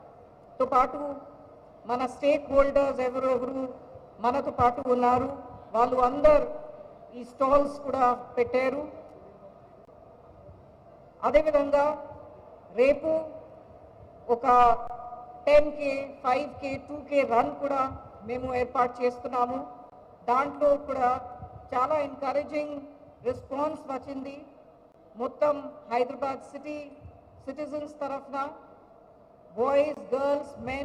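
Gap between chunks at 4.83, 9.85, 14.87, 19.90, 24.92 and 29.94 s: the sound arrives in 5-second chunks, with a 23 ms silence inserted at each join.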